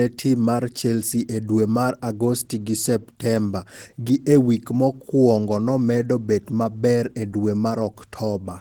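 The speech clip carries Opus voice compression from start to finish, and the coding damage is plainly audible. The band stays wide, with content reaching about 20.2 kHz, which fits hybrid operation: linear-prediction coding below 8 kHz and a transform layer above it. The coarsely coded excitation gives the speech a hoarse, slightly robotic texture, which fits a bitrate around 16 kbps in 20 ms frames.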